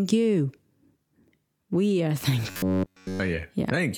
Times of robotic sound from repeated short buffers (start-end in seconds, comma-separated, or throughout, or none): 2.50-3.20